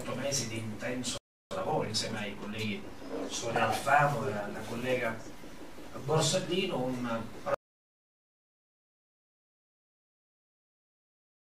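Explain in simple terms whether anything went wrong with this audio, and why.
At 1.18 s the player likely ran short of data, causing a playback stall: the sound freezes into silence for about 0.33 s before resuming at 1.51 s.

To recover the lost time, a time-compressed catch-up follows from 1.51 to 2.83 s. The player trims tiny pieces, so the audio runs about 1.25 times faster at normal pitch.

At 7.54 s, an audio dropout to silence begins, likely because the input was lost while recording continued. The sound cuts off completely, with no background hiss, and stays silent until the end.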